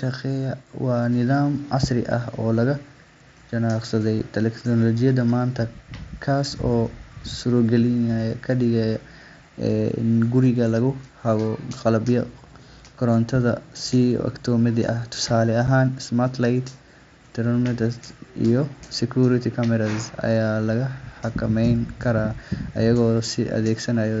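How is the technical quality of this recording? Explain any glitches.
The speech comes through a wideband Bluetooth headset link with a light grainy edge from the mSBC codec, interrupted by two brief dropouts.

At 4.2 s, just before "teknoolojiyadda maanta", and again at 15.67 s, there is a tiny abrupt hole of about 7.5 ms. This is unconcealed Bluetooth headset packet loss. Each gap fits a single lost voice packet between headset and phone, replaced by silence or an idle pattern rather than patched over.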